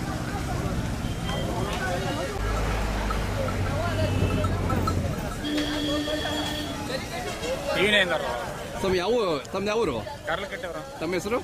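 At 7.79 s the audio drops abruptly to a lower-bitrate version of an adaptive stream, and it stays there until the clip ends at 11.43 s. The connection likely slowed, so the player switched streams. There is no gap. Codec artefacts rise, consistent with a fall from about 64 to 32 kbit/s.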